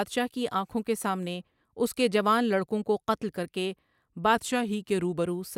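From 4.35 s to 5.24 s the speech abruptly slows by about 5.6 % and drops a semitone in pitch, then snaps back to normal speed and pitch. Speed and pitch move together, with no smooth transition at either edge. This is likely a drift correction step: clock-matching software changed the playback rate in a single jump to refill its buffer, holding the slower rate for just under a second before restoring it.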